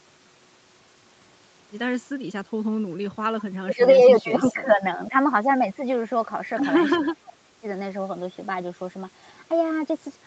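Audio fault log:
3.61–5.14 s and 6.97–7.65 s, speech suppressed in double talk: the speech dips by about 20 dB, then about 30 dB, in uneven pieces, likely because the echo canceller could not separate this side's speech from the overlapping far-end echo.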